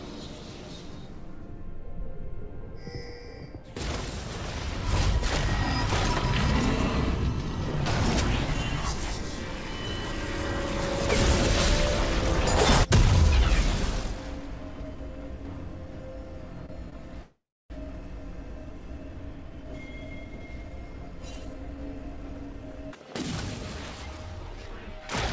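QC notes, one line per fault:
16.66 to 16.74 s and 16.90 to 16.94 s, short stall from a late packet: twice a packet came in late and the jitter buffer ran dry, so the receiver held the last bit of sound, about 29 ms then 21 ms, and picked up where it left off. Nothing's lost, just a slight hitch with a faint buzz or dip.
17.22 to 17.72 s, call audio freeze: the stream stopped for nearly half a second, likely packets stuck in transit. The last sound is stretched into a buzz or hiss that fades, then about 0.28 s of silence before the audio resumes right where it stopped, so it's a gap, not a cut.
19.28 to 23.07 s, jitter buffer speed-up: the buffer was holding too much, so the receiver trimmed small pitch-period slices over and over, roughly 0.4 s in all. It plays about 10% fast at the same pitch and comes across a bit hurried.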